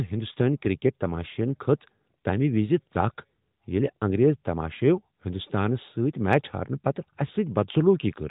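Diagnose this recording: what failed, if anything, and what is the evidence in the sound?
Nothing failed: the speech comes through a narrowband mobile codec path, with the band ending at 4 kHz as that path requires, and no fault can be heard anywhere in the recording.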